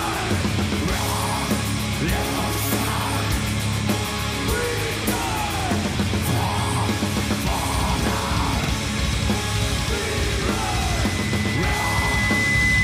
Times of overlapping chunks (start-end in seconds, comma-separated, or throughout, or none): 5.59-5.64, 8.64-8.69